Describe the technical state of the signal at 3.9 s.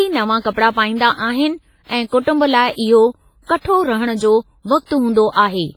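At 3.9 s, as throughout the clip, the speech sounds heavily ringing and washy with breathing hiss. This is likely WMA compression at a low bitrate around 24 kbps, smearing quantisation noise over tens of milliseconds.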